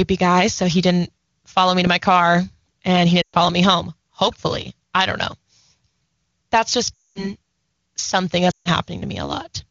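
Speech over AMR wideband, with the codec itself sounding clean, as expected near its top rate, but with three bursts of lost AMR speech frames at 3.21–3.36 s, 6.95–7.30 s and 8.51–8.68 s. In each, radio errors corrupted a run of frames and the decoder concealed them by repeating the last good pitch and vocal tract settings at falling gain. The voice drops to near silence within two frames. The longest gap, at 6.95 s, lasts about 0.35 s, and speech returns briefly weak or rough after each gap.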